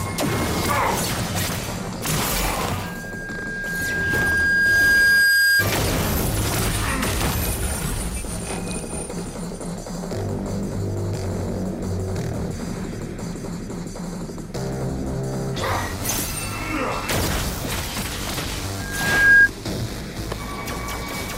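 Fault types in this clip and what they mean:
Loudspeaker feedback squeal: the microphone picks up its own loudspeaker until one tone runs away. Here a 1.6 kHz tone swells twice, first slowly, then fast.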